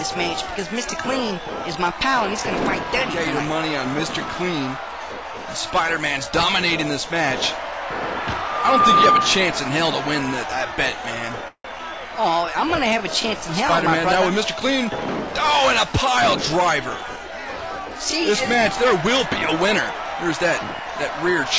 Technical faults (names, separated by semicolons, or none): call audio freeze; short concealed packet loss; jitter buffer speed-up